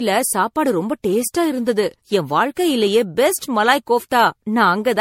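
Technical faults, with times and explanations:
Throughout: generation loss. The speech sounds swirly, hollow and smeared, with blurred attacks and nothing above 16.5 kHz, likely from about seven successive MP3 encodings at a rate near 64 kbit/s. Each pass requantises on a shifted frame grid, so noise and spectral holes accumulate. A spectrogram shows a hard ceiling and patchy gaps, and the waveform shows softened onsets.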